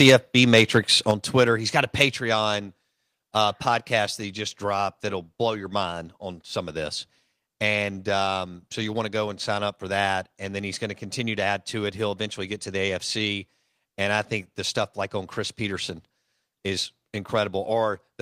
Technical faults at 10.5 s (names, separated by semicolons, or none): none